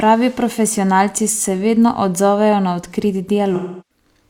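From 3.55 to 4.05 s, the speech hits AAC frame loss with concealment. About 341 ms of coded audio never arrived, which fits a run of eight frames. The decoder rebuilt the gap from the last good spectrum, so the sound turns smeared and noisy.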